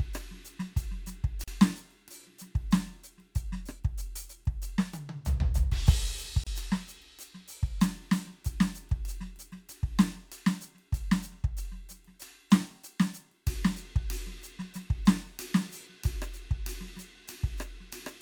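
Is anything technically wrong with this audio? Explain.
Yes. The music has a gap at a join of encoded pieces twice, at 1.44 to 1.48 s (38 ms) and 6.44 to 6.47 s (30 ms). Separately encoded pieces kept their start delay and end padding. Each shows as a thin, slightly smeared vertical blank across the spectrogram, then the music resumes where it stopped.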